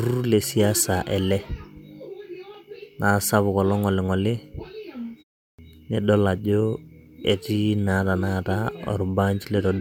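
Clipped start after a pause, at 5.45 s: after a 0.3 s silence the output device has gone to sleep and must wake again, so the first 136 ms of returning speech, up to 5.59 s, never reaches the output and the word bursts in abruptly.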